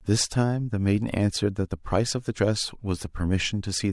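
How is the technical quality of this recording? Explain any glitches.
No technical glitches can be heard anywhere in this speech recording. There is nothing to explain, because no moment stands out as a fault.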